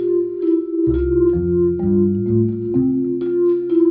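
No technical fault can be heard anywhere in this audio; the signal stays continuous and stable throughout, with nothing added, missing or distorted.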